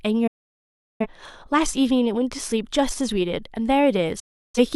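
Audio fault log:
0.27–1.06 s and 4.20–4.59 s, digital broadcast dropout: The receiver stopped getting decodable frames, through lost signal or failed checksums, and muted its output until valid frames resumed. Each time the speech fades to silence within about 8 ms, then stays dead for about 0.73 s and then about 0.34 s, which fits roughly 17 and 8 lost frames. The speech comes back later in the programme, and whatever was broadcast during each gap is gone.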